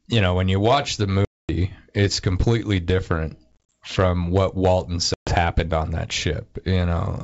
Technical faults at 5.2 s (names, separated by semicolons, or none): packet loss on an ADPCM call